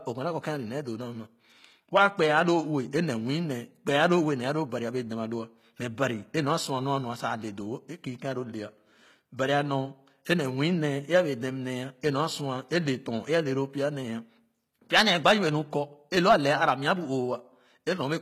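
From start to finish the speech has a bright but synthetic treble: s sounds come out gritty and lispy, with a metallic sheen, and nothing reaches above about 14.9 kHz. The likely cause is HE-AAC compression at a rate that fits roughly 20 kbps. Only the lower spectrum is properly coded, and the top band is rebuilt by copying lower bands upward under a coarse envelope. The rebuilt harmonics no longer match the real ones across the crossover, which is what gives the sibilants their false, grainy edge.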